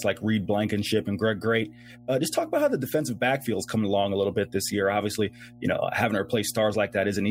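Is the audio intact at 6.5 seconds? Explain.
No. At 6.5 seconds the speech carries mains hum, present throughout the clip: a steady 60 Hz tone with low harmonics, roughly 25 dB below the speech. It points to a ground loop or nearby transformer coupling the power line into the signal path.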